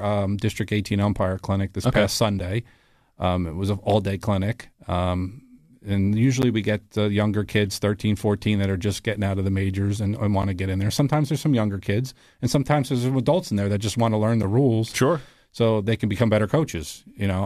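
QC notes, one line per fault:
2.39, 6.42, 10.42, 14.43 s: gap between stream segments, about 9 to 10 ms of hard-edged silence recurring every 4 s at segment boundaries, where player fills timestamp holes with silence; no speech lost.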